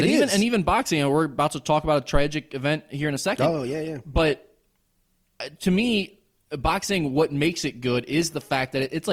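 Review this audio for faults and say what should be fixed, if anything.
Adaptive stream at a lower bitrate from 3.01 s to the end: the speech suddenly turns grainier, which fits a switch from 64 to 24 kbit/s Opus. Prevent it with a larger playback buffer or a more stable connection.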